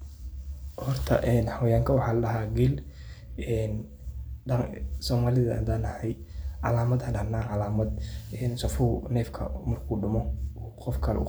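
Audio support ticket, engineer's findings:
Engineer's findings: no audio fault found on this speech clip; no action required on the ticket.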